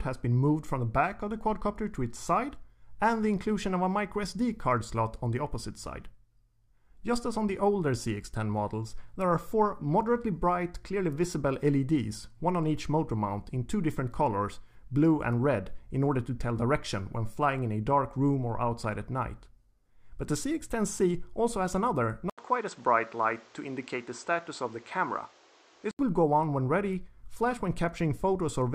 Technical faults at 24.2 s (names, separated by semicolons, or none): input switched to a poorer device